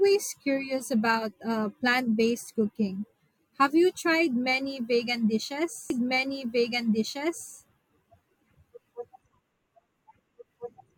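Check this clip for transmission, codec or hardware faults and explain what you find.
A doubled audio track runs from 5.90 s to the end: a second, equally loud copy of the speech trails about a second and a half behind. It likely comes from a slower capture path or misaligned edit. Unlike echo, it starts abruptly and has no decay or room colouring.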